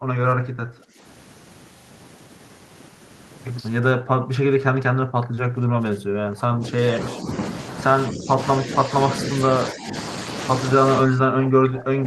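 Speech suppressed in double talk occurs at 0–1.03 s, 3.94–6.95 s, 7.12–7.41 s, 8.08–8.38 s, 8.59–9.53 s, 9.73–9.94 s and 11.05 s to the end. The speech dips by roughly 5 to 25 dB, deepest at the close. This is likely an echo canceller mistaking overlapping near-end talk for echo and attenuating both.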